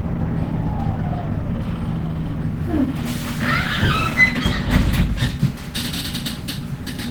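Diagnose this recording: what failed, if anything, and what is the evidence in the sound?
Codec stage: the whole recording has plainly audible coding damage. Tonal parts turn rough and grainy rather than swirling, with a hoarse, smeared texture typical of a low-rate hybrid mode. It is likely Opus compression at a low bitrate, around 16 kbps. Bandwidth stays full, with content reaching roughly 20 kHz. On a spectrogram the upper bands look filled but noisy and blotchy instead of showing clean harmonics, with few empty holes.

Buffer stage: from 5.22 s to the end at 7.1 s a steady 100 Hz buzz appears. This is a block size mismatch (truncated): one stage hands over blocks slightly longer than the next stage reads, and the tail of each block is discarded. The result is a discontinuity 100 times a second. The size difference is tiny, so speed stays at 1.0x and pitch is unchanged. A waveform shows regular small jumps every 10 ms, and a spectrogram shows a 100 Hz line with harmonics.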